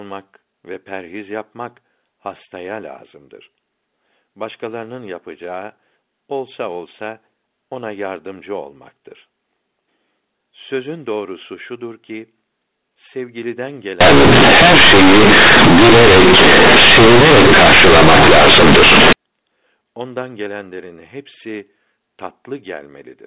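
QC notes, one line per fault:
14.01–19.13 s, companded audio read as linear: the A-law telephone bytes get played as raw 8-bit samples with no expansion, so every sign flip jumps across half the range. Quiet bits come out as loud as peaks, hence the harsh buzzy blast and noisy pauses.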